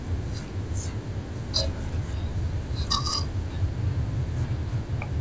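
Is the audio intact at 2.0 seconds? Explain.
No. At 2.0 s, and across the whole clip, there's a wrong sample rate fault. The speech plays at about two-thirds speed and roughly 7 semitones low, sounding slow and deep, which fits 24 kHz audio played back at 16 kHz without conversion.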